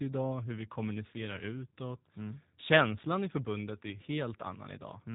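Speech carrying G.729 codec damage throughout, plainly audible: nothing above about 3.8 kHz, and a rough, buzzy, synthetic edge from the frame-by-frame pulse-and-filter rebuild, consistent with 8 kbit/s. A simple low-pass filter would dull the sound without adding that roughness.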